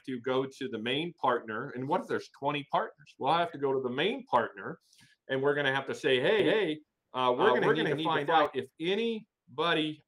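From 6.39 to 8.45 s the audio becomes a doubled audio track: a second, equally loud copy trails about a fifth of a second behind, likely from a slower capture path. Unlike echo, it is a single full-band repeat with no decay or room colour, and it starts and stops abruptly.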